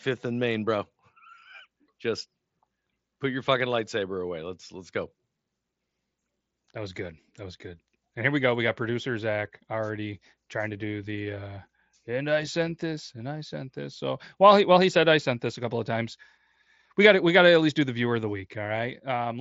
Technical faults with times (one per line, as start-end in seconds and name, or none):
none